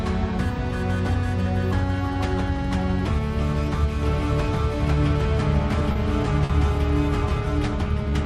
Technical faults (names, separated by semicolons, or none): doubled audio track; short stall from a late packet